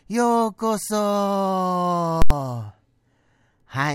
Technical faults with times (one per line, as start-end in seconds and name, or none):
2.22-2.30 invalid numbers at full scale